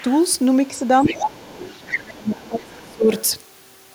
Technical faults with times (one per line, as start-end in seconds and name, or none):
0.00-0.16 other side's voice leaking through
1.03-1.99 other side's voice leaking through
1.05-1.36 speech suppressed in double talk
1.98-3.11 speech suppressed in double talk
2.39-2.48 other side's voice leaking through
3.17-3.23 other side's voice leaking through